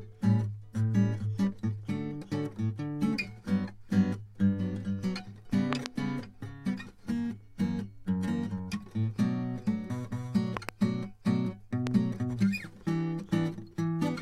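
Loud pops at 5.73–5.88 s and 10.57–10.71 s (each a quick double) and a single, softer one at 11.87 s, likely from a sudden voltage step such as a plug or switch glitch, jump far above the music, which continues underneath.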